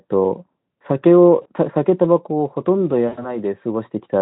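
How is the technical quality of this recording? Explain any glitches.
Two glitches break the audio, both VoIP packet loss concealed by the speech codec. The Speex coding itself adds faint or no audible damage. The first glitch runs from 1.41 to 1.46 s, about 40 ms, which fits two lost 20 ms frames. The second runs from 3.07 to 3.37 s, about 100 ms lost. When packets went missing, the decoder kept repeating its last pitch and spectral shape with falling gain. You hear the speech smear into a buzzy tone or coloured noise that fades instead of dropping to silence, and the longer event stays weak or distorted after packets resume.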